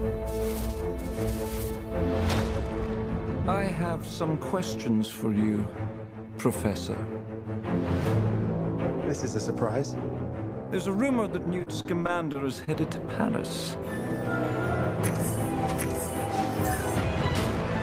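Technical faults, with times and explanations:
11.59–12.69 s, repeated packet loss (robotic sound): the audio turns choppy and briefly robotic, broken by seven short holes, the longest 37 ms. Packets went missing or arrived late one after another, and each hole was patched by extending the preceding sound, about 16% of this stretch.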